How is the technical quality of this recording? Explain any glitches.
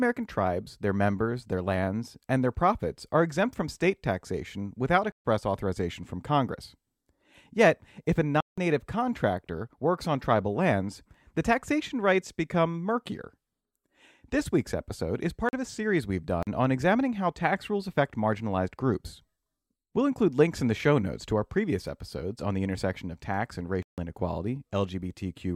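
The recording has five dropouts. Block of digital silence at 5.12 s (after "from state taxation without"), 8.41 s (after "if a"), 15.49 s (after "week's episode is"), 16.43 s and 23.83 s. Each time, the output buffer likely went unfilled and samples were zeroed, cutting abruptly to dead silence. The gaps last 128, 171, 43, 43 and 153 ms. All are long enough to be heard as short holes rather than ticks. The two 43 ms gaps are 2048 samples long and the 171 ms gap is 8192 samples.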